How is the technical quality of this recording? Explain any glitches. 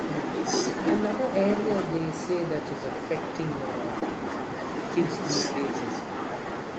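The recording carries three small glitches, all typical of a call whose audio stops at 8 kHz, which fits a wideband Opus stream at around 32 kbps.

The first two are a lost packet rebuilt from error correction, at 0.87 s and again from 3.15 to 3.17 s. Each time a single packet went missing, but the next one carried a low-bitrate backup copy, and the decoder played that instead. There's no gap. You just get about 20 ms of speech that sounds rougher and a bit noisier than what surrounds it.

The third is a short concealed packet loss from 3.99 to 4.03 s. Here about 20 ms never reached the decoder in time, and there was no backup copy. The receiver papered over the hole by extending the last sound it had, using its pitch if it was voiced and shaped noise if not, for roughly 18 ms. Then it crossfaded back into the real signal. It comes across as a brief smear or wobble, and a quick consonant there can get swallowed.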